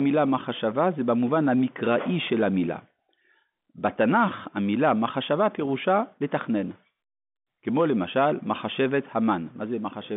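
Telephone speech carried over a G.711 A-law line, with the expected 150 Hz to 3.6 kHz band and nothing above about 3.7 kHz, shows no technical faults.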